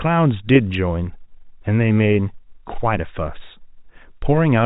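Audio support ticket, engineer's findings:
No faults found.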